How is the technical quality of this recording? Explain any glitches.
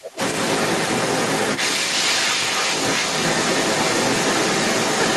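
The recording has one persistent fault. From start to finish, the other side's voice leaks through, a bit louder than the talker, likely from loudspeaker playback the echo canceller failed to subtract.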